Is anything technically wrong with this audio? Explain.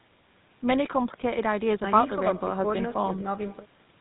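Yes. Throughout, this speech has gone through a GSM full-rate codec, and the damage is plainly audible. The codec rebuilds the voice from a vocal-tract model fed by sparse, evenly spaced pulses, and everything above 4 kHz is gone; voices come out buzzy and gravelly, which fits a 13 kbps full-rate stream.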